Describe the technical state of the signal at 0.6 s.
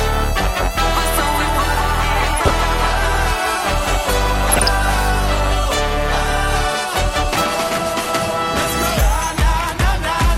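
At 0.6 s the sound is dull, with a granular, gurgling texture heard across the whole clip, likely MP2 compression at a low rate near 80 kbps: starved upper sub-bands drop out and flicker while remaining bands quantise coarsely. Unlike a steady low-pass filter, the treble comes and goes.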